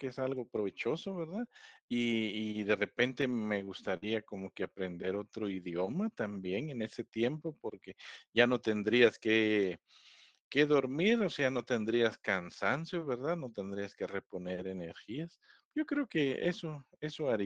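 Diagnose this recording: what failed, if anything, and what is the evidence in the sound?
The network stage failed: repeated packet loss, heard as robotic sound, between 3.21 and 4.04 s. Within that stretch there are three short dropouts, the longest 49 ms. About 76 ms of audio is patched by extending the preceding sound, giving a choppy texture. Another 60 ms is simply missing. Roughly 150 ms of the speech in total is reconstructed rather than received, because the concealer keeps bridging one hole just before the next arrives.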